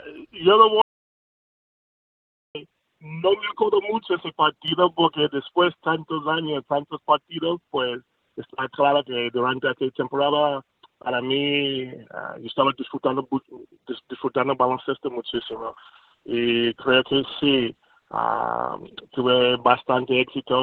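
At 0.82 s the sound cuts out completely, an audio dropout to silence lasting about 1.73 s until 2.55 s. There's no room tone at all in the gap, so the input was likely lost while recording carried on.

Between 4.68 s and 5.29 s there's a sudden gain jump of about 7 dB. Everything, including the background noise, gets louder at once with no fade, which points to a gain change likely applied instantly rather than ramped.

From 15.35 s to the end you get a call bitrate drop. The encoder falls from 48 kbps to 9 kbps, and the audio band shrinks from 20 kHz to 8 kHz. It sounds muffled and coarse, and it sits at its worst for about 3.7 s.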